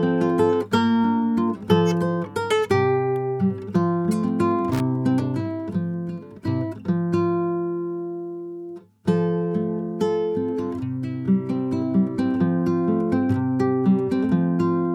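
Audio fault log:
4.73–4.80 s, loose connector crackle: a worn or dirty contact in the signal path briefly lost and regained continuity, chopping the audio on and off many times within about 75 ms, so a short, irregular burst of scratchy crackle breaks through the sound.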